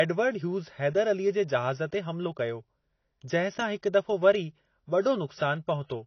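From start to end the speech is band-limited, with nothing above 6.6 kHz, and sounds dull and smeared with a warbly, fizzy edge on sibilants. This is likely AAC compression, the low cut-off and audible damage fitting AAC-LC at roughly 24 kbps.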